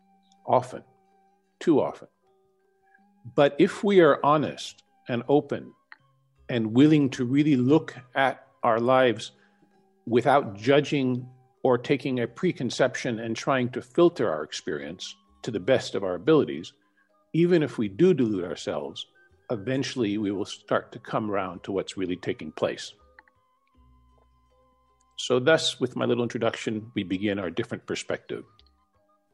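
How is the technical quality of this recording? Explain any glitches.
Nothing to flag here: the audio runs along without any glitches, dropouts or other technical hiccups worth explaining.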